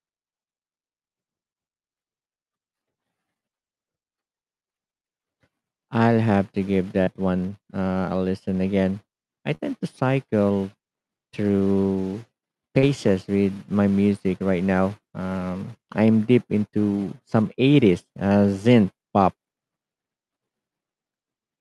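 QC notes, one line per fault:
7.03, 9.55 and 12.79 s, short concealed packet loss: three 40 ms gaps, after "I'll have to give", after "a listen again I", and before "with my music right", each patched by stretching the preceding sound, so you hear brief smeary wobbles.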